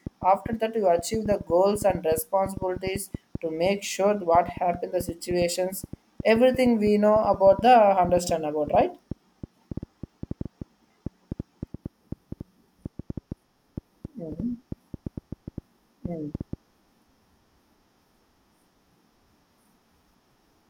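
From 0.07 to 16.54 s, a train of clicks ticks over the speech and its pauses. The clicks are unevenly spaced at about 5.6 per second, around a hundred in all, peaking slightly above the speech. Each is a sharp waveform spike and thin vertical spectrogram line, likely from equipment interference.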